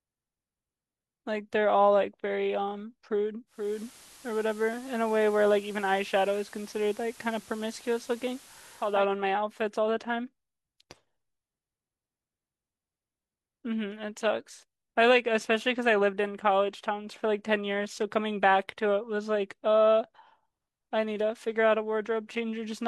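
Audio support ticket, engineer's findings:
Digital radio blending to analogue, 3.46 to 9.07 s. Receiver lost digital, cross-faded to FM over 0.36 s. Hiss roughly 25 dB down. Level shifts about 1 dB.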